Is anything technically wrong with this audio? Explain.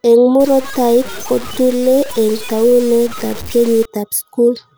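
Yes. From 0.40 to 3.85 s the speech turns grainy and harsh, with a rough distortion that rises and falls with the voice. Quiet syllable tails sputter or collapse to silence. This is likely low bit depth without dither. The signal has been truncated to 5 bits, so the error follows the waveform and sits only about 20 dB below it. On a waveform the samples show clear stair-steps. A spectrogram shows a broadband haze only where speech is present.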